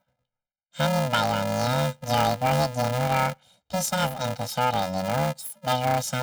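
A robotic buzz at about 375 Hz runs throughout the speech with no octave shift, from planar audio read as interleaved in 2.67 ms blocks.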